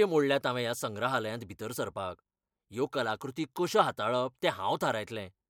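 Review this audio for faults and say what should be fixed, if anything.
Nothing to fix: no faults found in the speech recording.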